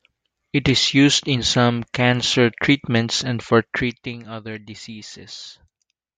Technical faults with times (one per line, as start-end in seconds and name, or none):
3.60-4.20 zipper noise